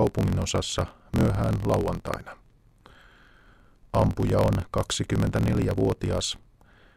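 A block size mismatch with truncation runs throughout the speech. One stage writes longer blocks than the next reads, so each block's tail is discarded. That gives a 43.1 Hz buzz, consistent with 1024-sample reads, and speech running 1.12 times fast at roughly normal pitch.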